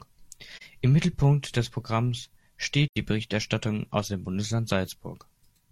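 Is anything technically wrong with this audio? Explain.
Yes. There is AAC frame loss with muting at 0.56 to 0.63 s and 2.88 to 2.97 s. The decoder zeroed the missing frames, about 43 ms and 85 ms (one and two frames). The overlapping windows fade the speech into a brief dip at the first and a short, soft-edged hole at the second.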